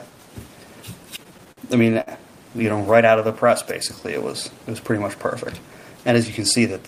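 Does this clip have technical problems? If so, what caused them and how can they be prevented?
Yes. Between 1.03 and 2.10 s there are repeated stalls (stutter): packets arrived late or slower than playback consumed them, so the jitter buffer kept running dry. Eleven times the receiver had to extend the last sound to cover the wait, about 191 ms in total, the longest gap 57 ms, roughly 18% of that stretch. Nothing is lost, but the audio drags and stutters. A larger or adaptive jitter buffer and a steadier, less congested network path would prevent it.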